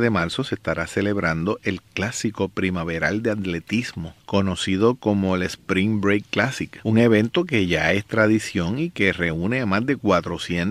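Nothing stood out as a technical problem on listening to the audio.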